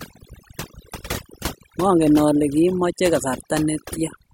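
Speech, with overdone noise removal throughout. Bands near the noise estimate are cut away, leaving twinkling near-silence between phrases.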